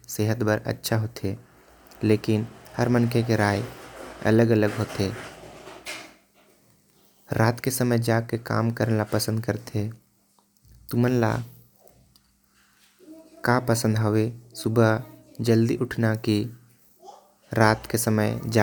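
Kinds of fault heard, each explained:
No technical faults turn up anywhere in this speech recording, so there's nothing here to list or explain.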